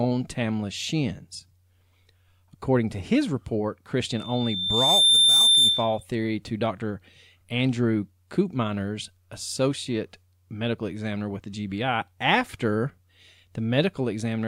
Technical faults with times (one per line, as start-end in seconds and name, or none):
4.09-6.03 loudspeaker feedback squeal